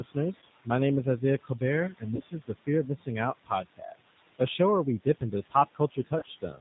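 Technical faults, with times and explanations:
Throughout: noise suppressor artifacts. The suppressor pulls the steady room noise down by about 17 dB between phrases and lets it back up under the speech, so the residual background pumps from frame to frame.
Throughout: G.729 codec. The speech is rebuilt at 8 kbit/s from a vocal tract filter, a pitch predictor and a few pulses per subframe, and nothing above 4 kHz survives. The voice sounds dull, rough and plainly synthetic, and the leftover background warbles.
0.0–0.67 s, 1.04–1.61 s (just after "name is"), 1.92–3.08 s, 3.44–4.59 s (ending just before "where we"), 5.03–6.6 s (just after "where we"): speech cut by the noise suppressor. Quiet consonants and word tails were classified as noise and attenuated with the background, by about 11 dB at the start and up to about 18 dB at the end, so they sound swallowed and faint.
0.39–0.44 s, 2.16–2.22 s, 6.19–6.25 s: VoIP packet loss concealed by the speech codec. 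Each time about 30 ms of audio went missing, and the decoder extended the last pitch and filter with falling gain. The gap becomes a short buzzy, fading tone, and the voice stays weak for a few frames afterwards.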